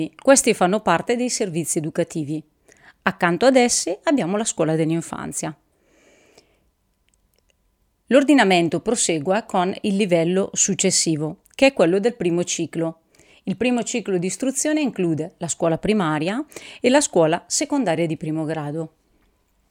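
Listening to the speech recording, nothing technical stood out at any point.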